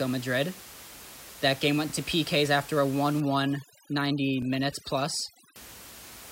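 Speech with two overlapping-chunks stutters, at 1.90 s and again at 4.42 s. Each is a 25 ms slice played twice, so the chunk boundaries are 2.5 s apart and each new chunk starts a bit before the previous one finished. From 3.20 to 5.56 s there's overdone noise removal. The room noise, sitting about 18 dB under the voice, drops and breaks up into twinkly specks, and the quieter parts of the voice are stripped out with it.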